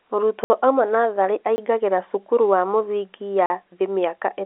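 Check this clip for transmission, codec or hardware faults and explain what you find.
Three blocks of digital silence interrupt the speech, over a G.711 telephone path that passes nothing above about 3.8 kHz. The first, 0.44 to 0.50 s, is a 60 ms hole just before "oima natharĩ". The second, 1.56 to 1.58 s, lasts 20 ms between "oima natharĩ" and "cukuru wa mũthingi ya". The third, 3.46 to 3.50 s, lasts 40 ms after "cukuru wa mũthingi ya". In each, samples were zeroed, most likely because the output buffer went unfilled in time. The signal drops to silence with no fade. A noise gate or fade would ramp instead.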